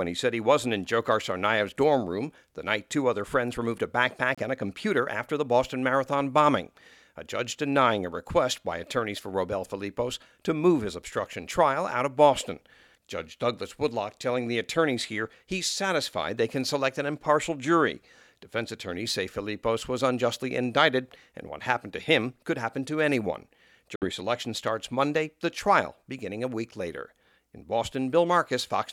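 At 4.35 s (about 50 ms) and 23.96 s (about 140 ms), silent gaps appear as flat waveform and blank spectrogram columns, likely a Bluetooth dropout.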